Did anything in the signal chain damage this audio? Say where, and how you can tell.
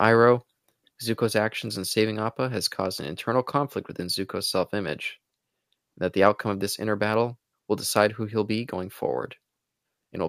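Yes. At 1.02 s the speech and background noise drop together by about 4 dB in a single step, with no fade. This is a microphone volume stepped down event, likely call-processing automatic gain control lowering the device's input volume after judging the level too hot.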